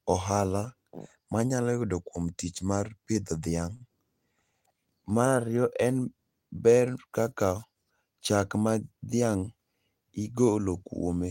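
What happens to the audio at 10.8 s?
Nothing goes wrong at 10.8 s; the speech carries on intact through that point with no audible fault.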